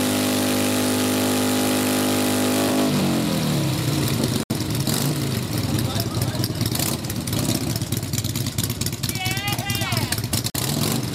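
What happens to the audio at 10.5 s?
A gap between stream segments opens from 10.5 to 10.55 s: mismatched timestamps at a segment boundary, which fits 6-second segments, leave a 45 ms hole filled with silence. Nothing is lost, but the waveform drops abruptly to a flat line and the spectrogram shows a hard-edged blank column.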